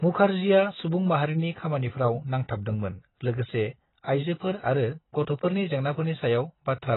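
From start to finish the speech sounds dull and muffled, with nothing above 3.9 kHz, and the sibilants and sustained vowels carry a warbling, fizzy smear. This is likely AAC compression, with AAC-LC coding the signal hard enough to cause heavy damage, which fits a bitrate of around 16 kbps. Starved of bits, the encoder lowers its cut-off and quantises the remaining frequency lines so coarsely that the spectrum gapes and churns from frame to frame.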